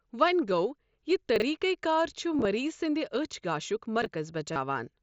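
At 0.46 s there is concealed Bluetooth headset packet loss: about 15 ms of voice data between headset and phone never arrived, and the receiver patched it by repeating matching waveform. From 1.36 to 1.42 s the chunks play out of order, with a 20 ms chunk arriving two chunks late. The sound briefly jumbles. Between 2.38 and 2.45 s about 45 ms is lost in short scattered runs of no more than 15 ms each. The repeated patches leave a buzzy roughness. From 4.02 to 4.06 s a 20 ms chunk plays one position late, giving another jumbled stumble. From 4.53 to 4.56 s a 30 ms loss is filled with held, buzzy waveform, with a slight warble as real audio resumes under the mSBC headset codec.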